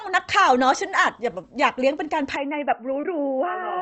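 Short concealed packet loss hits at 1.41 to 1.45 s: about 20 ms of audio never arrived in time, and the receiver patched the hole by extending the preceding sound before blending back, leaving a brief smear in the speech. From 2.36 s to the end, the input likely switched to a poorer device: with no gap at the switch, the sound abruptly turns dull and boxy with nothing above 3 kHz, drops about 5 dB in level, and gains a faint new noise floor well below the speech. A second short concealed packet loss, again about 20 ms, smears the audio at 3.01 to 3.05 s.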